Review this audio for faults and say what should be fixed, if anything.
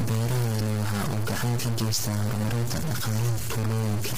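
The whole clip, start to finish, has a noise-like distortion running through the speech, and it carries on into the pauses. That pattern is likely a stuck bit: one bit of every sample pinned at 0 or 1, so about half the values are off by that bit's weight and quiet gaps fill with noise. To prevent it, check the converter and the wiring of its data lines.

Across the full length the speech also has heavy low-delay AAC compression damage, with a rough, grainy texture, noise between the harmonics and nothing above 15.6 kHz. That likely comes from AAC-ELD, the video-call codec, at a rate that fits around 24 kbps, where the low bitrate leaves too few bits per frame. To prevent it, raise the bitrate or capture the signal before it enters the call encoder.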